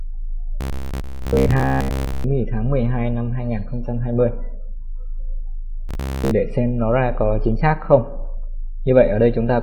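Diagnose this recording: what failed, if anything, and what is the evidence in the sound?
The failure sits at the driver or buffer stage: robotic sound from repeated short buffers, from 0.61 to 2.24 s and again from 5.89 to 6.31 s. Both stretches carry a rigid, metallic buzz at 66.8 Hz, which fits a loop about 15 ms long. The likely cause is audio arriving too seldom, so the last short chunk gets replayed to fill the gap, and most of the real material in those spans is simply skipped.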